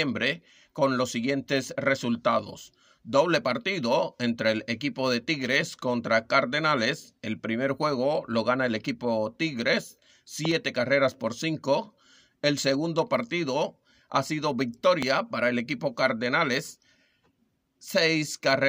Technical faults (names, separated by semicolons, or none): loud pop